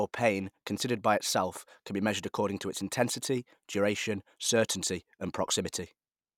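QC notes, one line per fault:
No faults detected on listening; speech continuity holds throughout.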